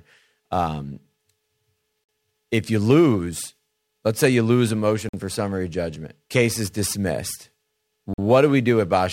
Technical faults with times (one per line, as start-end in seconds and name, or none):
2.04-2.09 gap between chunks
5.09-5.13 gap between chunks
8.13-8.18 gap between chunks